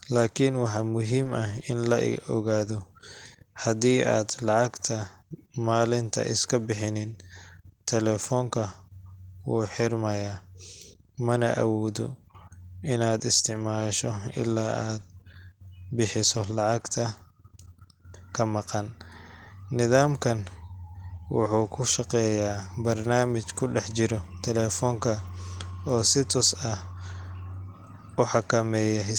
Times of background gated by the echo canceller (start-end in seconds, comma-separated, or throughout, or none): none